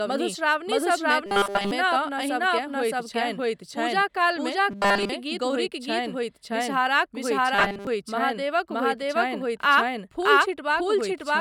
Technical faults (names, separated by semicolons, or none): doubled audio track; robotic sound from repeated short buffers